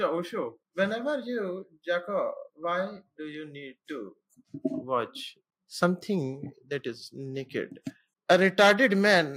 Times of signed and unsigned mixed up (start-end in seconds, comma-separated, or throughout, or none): none